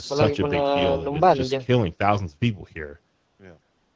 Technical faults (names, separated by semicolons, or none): AMR comfort noise